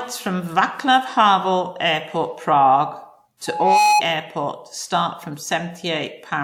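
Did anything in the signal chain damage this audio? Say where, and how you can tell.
Yes. Loudspeaker feedback squeal at the playback/pickup loop: from 3.46 to 4.02 s a single 838 Hz tone builds over roughly 0.3 s, to about 5 dB above the speech.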